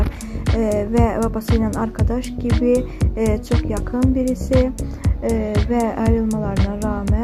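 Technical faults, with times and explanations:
No technical faults found anywhere in the clip.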